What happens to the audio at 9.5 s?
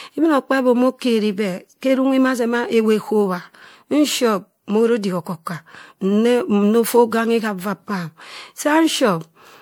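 Generation loss affects 9.5 s as it does the whole speech clip. The audio sounds swirly, smeared and hollow, with blurred attacks. This is likely from MP3 encoding repeated about four times, at what sounds like 96 kbit/s, with each pass requantising on a shifted frame grid.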